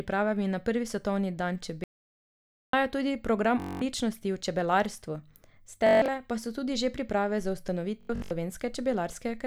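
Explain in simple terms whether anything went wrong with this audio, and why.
The audio input was likely lost for a moment, causing an audio dropout to silence: right after "svetovni dan", from 1.84 to 2.73 s, the speech vanishes into total silence.

Bluetooth stutter: wireless packets went missing, so the receiver replayed tiny slices, making a brief buzzing stutter at 3.60–3.82 s (before "v čebelarstvu"), 5.87–6.08 s (before "pa so tudi že") and 8.01–8.31 s.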